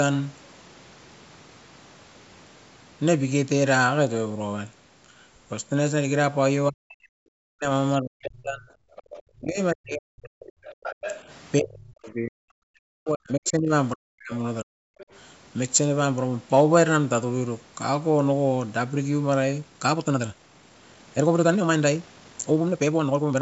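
Speech suppressed in double talk at 6.69 to 7.69 s and 8.01 to 8.71 s: the talker's speech sinks by up to about 40 dB, likely because the echo canceller confused it with loudspeaker echo during overlap.

Other side's voice leaking through at 8.96 to 9.23 s: a faint second voice, about 20 dB below the talker, slips past echo cancellation that likely left residual loudspeaker pickup.

Speech suppressed in double talk returns at 9.32 to 10.43 s, with roughly a second of the talker dipping or cutting out in pieces.

Other side's voice leaking through at 10.42 to 11.21 s is louder, only about 10 dB under the talker.

Speech suppressed in double talk at 11.6 to 14.32 s is the longest stretch, with about two seconds of gating, followed by a short cut at 14.63 to 14.78 s.

Other side's voice leaking through at 14.98 to 15.19 s is a brief, quiet scrap around 25 dB down.

Time-stretched section from 19.56 s to the end: the pace jumps to about 1.64 times normal speed while pitch holds, likely from piece-dropping time compression, so the speech sounds rushed.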